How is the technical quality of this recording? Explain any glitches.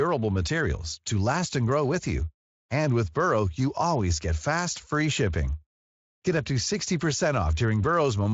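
Nothing in this speech recording stood out as a glitch when I listened to it.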